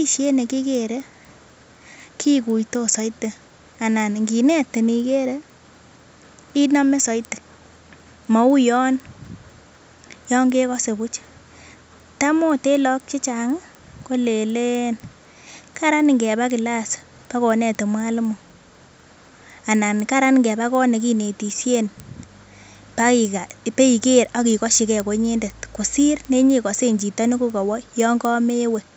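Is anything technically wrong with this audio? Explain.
Yes, there's one problem running through the whole speech clip: the resampler restarted on every block. Going from 16 kHz to 48 kHz in 250 ms chunks leaves an error at each seam, so you get steady ticks at 4 Hz.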